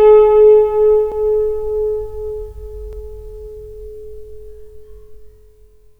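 At 1.12, 2.93 and 5.14 seconds the sound jumps forward with no gap, the first skip losing about 15 ms and the later two only a few milliseconds. These are likely dropped buffers (overrun), where samples were overwritten before being read.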